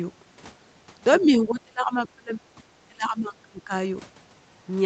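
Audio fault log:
1.13–1.28 s, other side's voice leaking through: a brief scrap of a second voice surfaces underneath the main speech, sitting around 20 dB down. It sounds like loudspeaker playback picked up again by the microphone, most likely because the echo canceller failed to subtract all of the far end's signal. Because it lasts only about 0.15 s, it comes across as a faint fragment rather than a sustained competing voice, and it runs into the point where the main speech starts to duck.
1.2–2.61 s and 2.88–3.72 s, speech suppressed in double talk: the main speech is pushed down in two stretches, by as much as about 30 dB in the first and about 25 dB in the second. Roughly a second of the first span and roughly 0.7 s of the second are affected, so the voice dips in those stretches. The likely cause is both sides talking at once, leaving the echo canceller unable to tell its own talker from the loudspeaker echo, so it attenuated everything in the microphone signal. 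Above 8 kHz the sound is empty throughout, as the Opus call path at this bandwidth would leave it.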